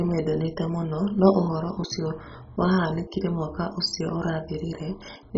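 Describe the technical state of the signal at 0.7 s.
At 0.7 s the speech is dull and gurgly, and that's there for the whole clip, not just this moment. It's likely MP2 compression: starved of bits, the upper sub-bands drop out entirely, so there's nothing above 7.5 kHz. The bands that remain are coarsely quantised and flicker, giving that granular texture. The heavy damage fits a very low bitrate, something like 16 kbps.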